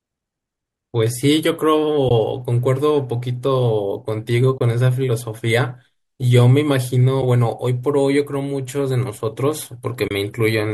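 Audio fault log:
2.09–2.11 s, 4.58–4.60 s, 7.22 s, 10.08–10.11 s: AAC frame loss with muting. Short silent gaps of 10 to 30 ms where the decoder zeroed the lost frames. Overlapping windows fade each gap out and in. The gap lengths fit 10 ms frames, likely from low-delay AAC.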